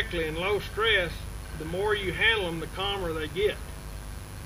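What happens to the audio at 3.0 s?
At 3.0 s there's mains buzz running under the sound, as it does through the whole clip. Switching spikes on the 50 Hz supply spray harmonics up into the kilohertz range, giving a steady, raspy buzz about 20 dB below the signal.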